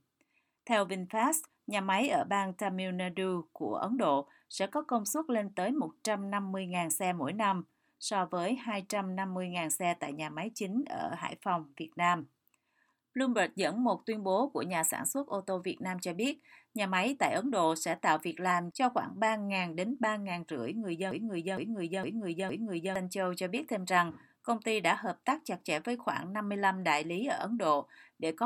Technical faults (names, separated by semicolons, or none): broken-record loop